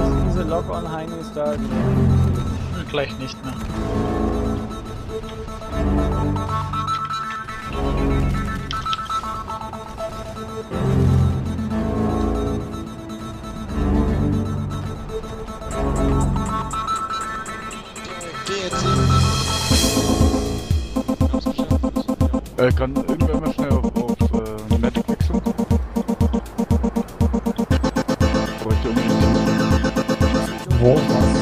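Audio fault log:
No faults detected.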